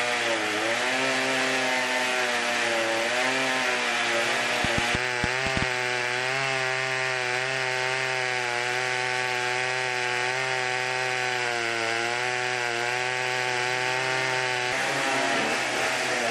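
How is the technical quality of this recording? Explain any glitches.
The recording has one clear glitch, a train of clicks from 4.65 to 5.63 s. About seven sharp, similarly shaped pops at around 6.1 per second, unevenly spaced, stand well above the sound. This likely comes from interference or a faulty connection or power supply. Unlike random crackle, the clicks match each other and come in one brief burst.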